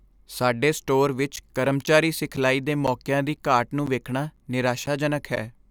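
From 1.36 s, just after "ਸਾਡੇ ਸਟੋਰ", until 5.37 s, periodic USB or driver dropouts cut roughly 10 ms of speech to silence every 0.5 s, about ten times, heard as regular ticks. The waveform shows evenly spaced flat gaps; the spectrogram shows thin vertical breaks.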